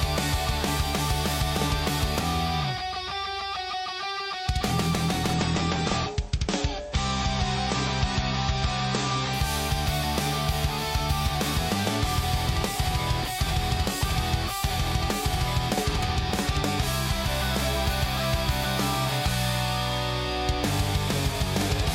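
From 5.33 s to 9.33 s the stream drops to a lower bitrate for four seconds: the top end suddenly stops around 8.3 kHz and the sound turns smeary and swirly, which fits a fall from 128 to 30 kbit/s MP3. It snaps in and out with no gap.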